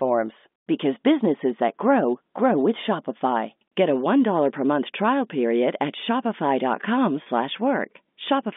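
At 7.23 s the speech briefly freezes. Packet loss with pitch repetition sets in until 7.26 s. About 30 ms of audio failed to arrive, which fits a single lost packet. The receiver filled the hole by looping the last pitch period of the voice. Because the gap is so short, the sound holds for an instant as a slightly buzzy, sustained tone. The speech then resumes with a quick cross-fade. The line carries G.711 telephone coding, limited to roughly 200 Hz to 3.6 kHz.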